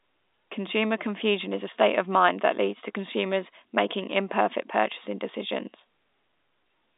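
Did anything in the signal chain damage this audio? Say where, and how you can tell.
No, the chain left this speech undamaged.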